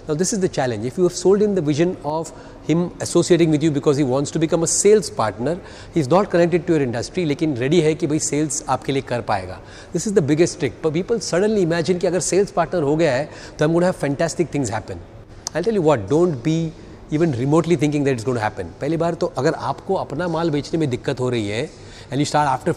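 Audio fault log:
2.10–2.26 s and 15.24–15.30 s, one channel drops out: the level suddenly sinks by about 6 dB for 160 ms and then 58 ms before snapping back. That's likely one stereo side going silent, so the mono sum keeps only half the shared material.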